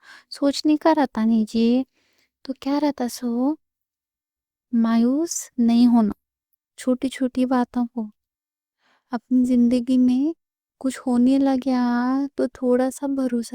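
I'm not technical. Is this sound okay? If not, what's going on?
Yes, it's fine: nothing in this recording glitches, drops out or breaks up anywhere, so there's nothing to worry about.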